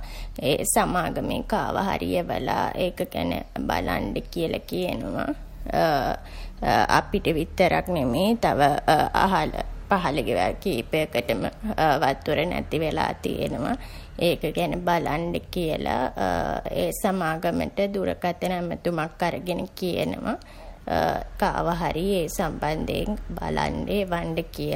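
At 0.36 s the speech carries a single bit error spike: one sample has a flipped bit, so its value leaps by a power of two and snaps straight back on the next sample. The excursion reaches about -15 dBFS and lasts only that one sample, which makes it a broadband click with no relation to the surrounding audio. It registers as one short, sharp tick near the very start of the recording.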